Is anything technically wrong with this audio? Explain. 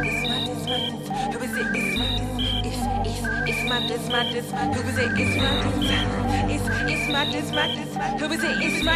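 No, nothing technically wrong can be heard in this audio at any point.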